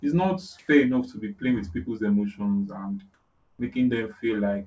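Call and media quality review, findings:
Comfort noise in place of the background, 0.59–0.68 s and 3.14–3.59 s: room tone becomes flat, featureless hiss, second gap about 4 dB quieter. Likely sender DTX with receiver-generated noise; unlike a gate or dropout, never silent. Band tops out at 8 kHz, consistent with G.722.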